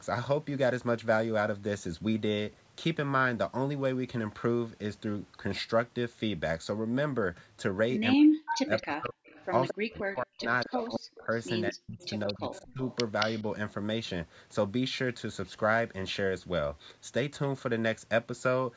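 Speech suppressed in double talk hits this speech recording at 8.16–9.26, 9.72–11.3 and 11.71–12.82 s, with the voice dipping by up to about 40 dB. An echo canceller likely ducked it while both sides spoke. Echo leak appears at 8.46–8.85, 9.27–9.99, 10.61–10.87, 11.32–11.38 and 12.0–13.42 s as a copy 223 ms late, about 5–30 dB below the speech, likely from loudspeaker pickup that cancellation missed.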